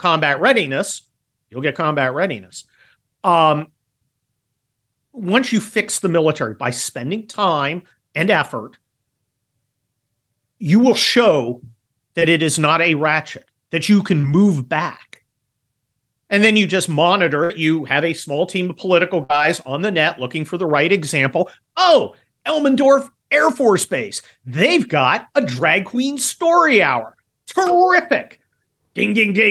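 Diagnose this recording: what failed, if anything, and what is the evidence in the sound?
The network path dropped audio packets, and the receiver's concealment patched three short holes: at 7.31–7.35 s, 12.19–12.23 s and 14.21–14.25 s. Each is short concealed packet loss of about 20 ms, heard as a brief smear or wobble in the speech. The decoder extended the preceding sound over the gap, pitched or noise-like, then blended back into the real signal. A short consonant falling in one of these gaps can disappear.

Two longer gaps are a burst of packet loss, also on the network side. At 17.43–17.52 s, about 60 ms of audio is missing and roughly 62 ms was synthesised. At 19.24–19.31 s, another 60 ms is missing, with about 56 ms filled. The concealment held the last sound and faded it, so a held buzz or decaying hiss replaces the lost speech, and the talk resumes further along with that stretch gone.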